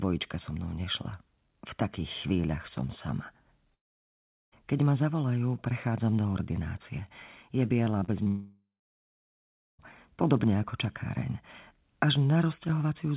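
Right after "takých chvíľach som sama", at 3.74 s, the line goes dead for about 0.8 s, until 4.54 s. That's a long network dropout, most likely a run of packets that never showed up. The receiver stretches the last bit of sound into a fading buzz, then there's essentially silence for most of that gap. When the audio returns, whatever was said in between is simply gone.

Around 8 s there's a cluster of short concealed packet loss: one at 8.00 s, a 40 ms one from 8.04 to 8.10 s, and another at 8.24 s. Each hole is only a few hundredths of a second, patched by extrapolating the preceding sound and cross-fading back in. You hear them as quick smears or little wobbles, and a short consonant can get swallowed.

That last blip runs straight into a second long network dropout, again likely lost packets, from 8.28 to 9.81 s, about 1.5 s. There's a brief fading tail, then roughly 1.1 s of silence before the sound picks back up at "podobne ako čakáreň", with the intervening stretch missing. 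Throughout, the call path itself sounds like narrowband telephony with nothing above 4 kHz, which fits G.711 A-law.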